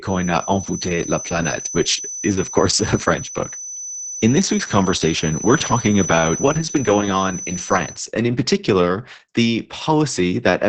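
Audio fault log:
throughout: Opus voice compression. The speech sounds muffled, hoarse and slightly robotic, which fits SILK coding at about 10 kbps. A spectrogram shows an empty band above 8.8 kHz.
0.0–8.0 s: feedback whistle. A thin 6 kHz tone at one pitch, slowly swelling and fading, sits roughly 10 dB under the speech and stops just before "and in particular the". The likely cause is a loudspeaker-to-microphone loop held right at the edge of feedback. A spectrogram shows it as a single unbroken horizontal line.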